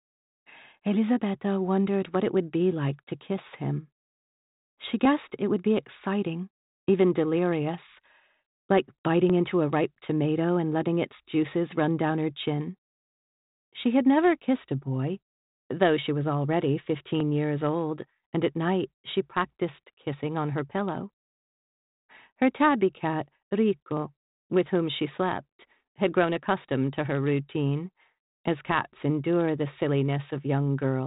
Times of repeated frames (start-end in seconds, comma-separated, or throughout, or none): none